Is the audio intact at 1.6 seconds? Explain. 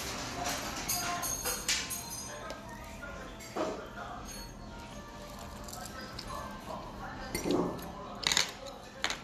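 Yes, the sound at 1.6 seconds is intact, with no audible fault there.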